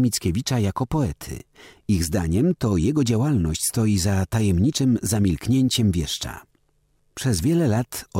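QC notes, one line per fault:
Nothing here stood out as a problem on this listen, so there's nothing to log for this one.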